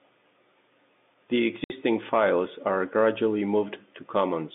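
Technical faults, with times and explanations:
1.64–1.70 s, packet loss filled with silence: the speech drops out for 60 ms just before "files are gradually". The gap is silence, not concealment, so it is heard as a hard hole where the waveform is cut off and then resumes abruptly. Its length fits three consecutive 20 ms packets lost on the telephone-band G.711 link, with the receiver playing silence instead of repeating or smoothing the surrounding audio.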